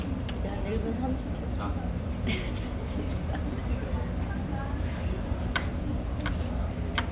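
No faults: the everyday sound arrives over a normal call path, band-limited with nothing above 4 kHz, which points to narrowband G.711 A-law coding.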